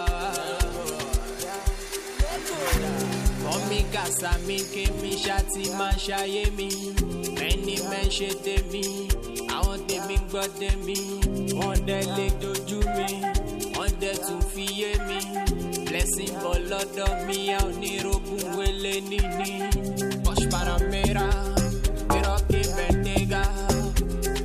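No technical faults are audible.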